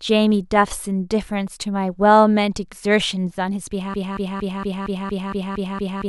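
A stall in the player, encoder or stream likely froze playback of this speech at 3.94 s, leaving a broken-record loop: one 231 ms fragment repeats exactly, back to back, nine times through to the end, and the speech that should follow is lost.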